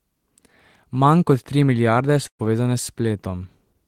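Speech with a burst of packet loss from 2.27 to 2.41 s, right after "kot tri milijarde". The last sound is stretched, then fades to near silence. About 120 ms of speech is skipped.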